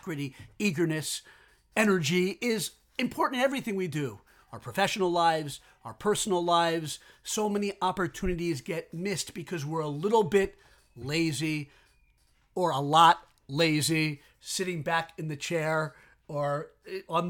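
Nothing goes wrong anywhere in this speech recording, so there's no technical fault to point to.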